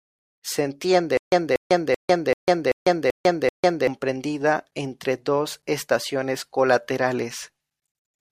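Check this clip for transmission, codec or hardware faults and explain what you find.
One fault stands out: a stutter with silent gaps between 1.17 and 3.87 s. The player or stream likely stalled, replaying its last 237 ms fragment at each retry before running empty. That same burst returns seven times, once every 386 ms, with 149 ms of digital silence between repeats, and the audio that should have played there is lost.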